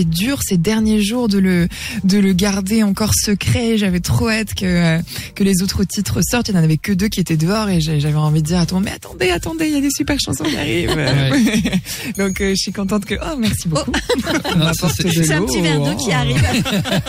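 The signal carries no audible technical fault at any point; it stays continuous and intact throughout the clip.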